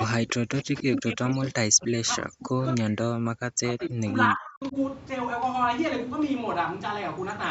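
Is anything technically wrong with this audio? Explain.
Yes, there are two faults in this speech.

Echo leak, at 0.00 to 0.04 s and again at 3.82 to 3.86 s: brief scraps of a delayed copy of the speech, arriving about 0.3 s late (297 and 299 ms) and roughly 20 dB below the direct speech. The likely cause is a far-end loudspeaker echo that the echo canceller failed to remove fully.

Speech suppressed in double talk, from 0.07 to 2.61 s and from 2.78 to 4.76 s: the speech dips, in places by around 40 dB, and drops out in pieces for about two seconds in the first span and about one and a half in the second. This likely happens because the echo canceller, faced with both sides talking at once, could not separate the talker from the echo and attenuated both. The 8 kHz upper limit of the Opus call path is present throughout.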